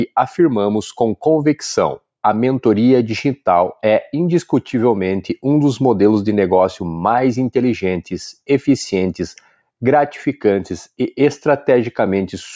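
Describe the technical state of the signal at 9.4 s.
At 9.4 s the signal shows sound cut by the noise suppressor, running from 9.38 to 9.55 s. The suppressor misjudged this stretch as noise and pulled it down, by about 12 dB at its deepest, for roughly 150 ms, so steady or decaying parts sink and their tails end early while abrupt onsets survive. On a waveform the envelope dips sharply there. A spectrogram shows the energy fading below 8 kHz, the ceiling set by the call microphone processing.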